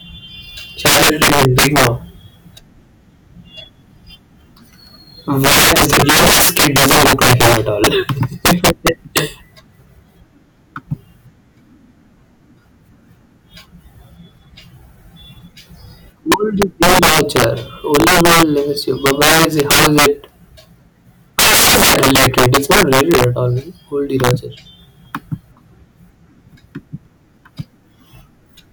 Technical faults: integer overflow

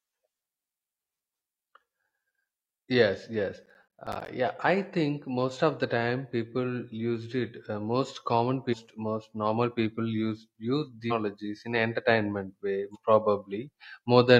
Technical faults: processor overload crackle; damaged data in a compressed stream

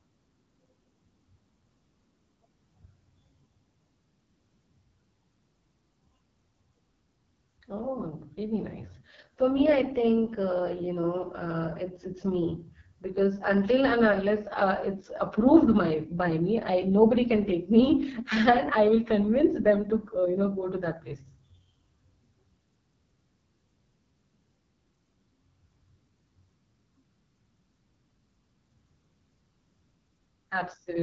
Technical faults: AMR wideband (HD Voice) codec

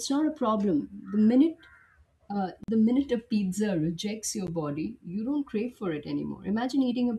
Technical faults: block of digital silence

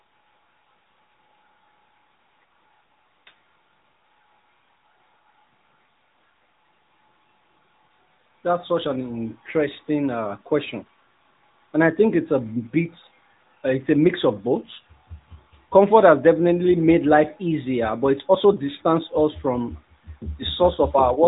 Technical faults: AMR narrowband mobile codec

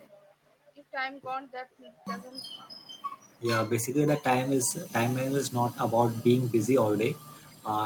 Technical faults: clipped start after a pause; echo leak

